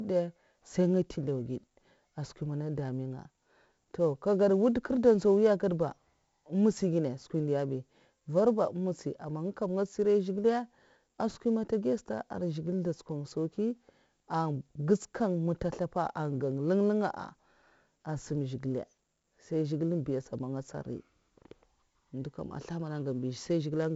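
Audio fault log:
Throughout: 4-bit ADPCM compression. Each speech sample is coded as a small 4-bit step from a predicted value, and the step size adapts as the level changes. The coding error rides on the signal, so a gritty hiss rises with every loud syllable and falls back in pauses. Sharp onsets distort where the step cannot grow quickly enough. Damage is heavy. Nothing is present above 7.7 kHz, which dulls the sound and fits a 16 kHz sample rate at 64 kbps.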